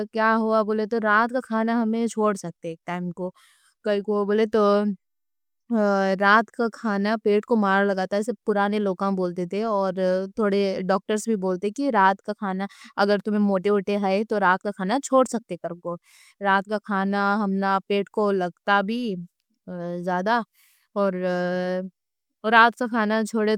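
No technical faults can be heard anywhere in this recording.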